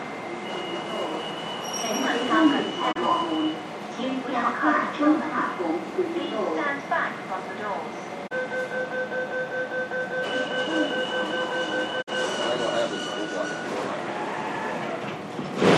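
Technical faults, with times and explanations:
2.91–2.97 s, 8.26–8.33 s and 12.01–12.09 s, digital broadcast dropout: the receiver stopped getting good frames and muted, with a quick fade of about 20 ms into each hole. The first two gaps lose about 24 ms of audio and the third about 48 ms, which fits one dropped frame and then two. The sound sent during those gaps never returns, and playback simply resumes further along in the sound.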